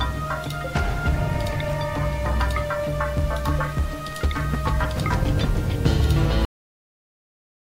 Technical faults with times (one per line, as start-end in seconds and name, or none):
6.45-7.74 cut-off end